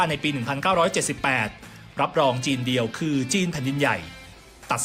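Listening closely, nothing in the audio stood out as a technical fault at any point.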